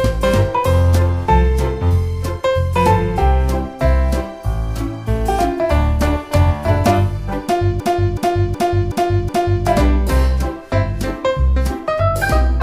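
A system hang loop runs from 7.80 to 9.66 s. The playback path stalled while the hardware kept replaying its ring buffer, so one 372 ms slice repeats five times, a stutter at about 2.7 Hz that fits a 16384-sample buffer.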